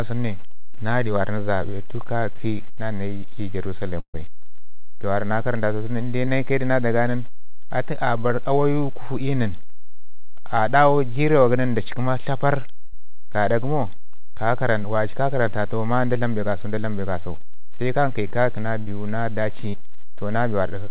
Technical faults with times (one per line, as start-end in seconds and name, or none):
0.00-20.91 DC offset
4.00-4.16 burst of packet loss
6.26-6.29 short concealed packet loss
12.85-12.95 burst of packet loss
18.79-18.89 burst of packet loss
19.69-19.75 short concealed packet loss